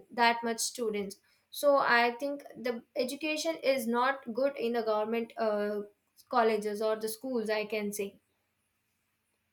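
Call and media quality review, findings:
No audible faults found.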